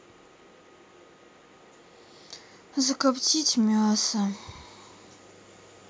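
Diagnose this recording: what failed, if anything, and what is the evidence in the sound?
Nothing failed: the speech shows only the expected effects of a call's microphone processing, with the lowest bass trimmed by its high-pass filter and no content above 8 kHz.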